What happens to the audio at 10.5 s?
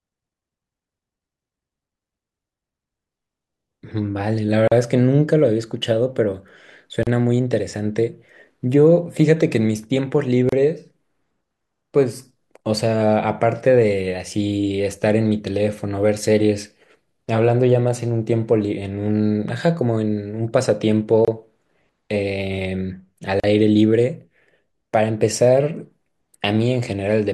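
At 10.5 s the clip contains a gap at a join of encoded pieces. Two separately encoded segments were butted together without trimming, so the encoder's start-up delay and the padded final frame stayed in the stream. The result is a silence of about 31 ms, from 10.49 to 10.52 s, cutting into continuous speech with smeared edges before the sound resumes exactly where it broke off.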